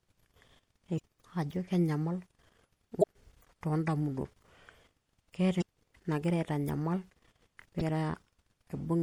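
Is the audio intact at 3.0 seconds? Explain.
No. Damaged data in a compressed stream hits from 2.99 to 3.04 s: corrupt bytes in the encoded file make the decoder misread or drop frames and hunt for the next valid header, producing a brief squawk or blip.

Underneath, the whole clip carries plainly audible MP3 compression, likely from a low-bitrate encode around 64 kbps. Weak frequency components flicker between frames, giving a watery, swirly quality, metallic chirps on s sounds and smeared attacks.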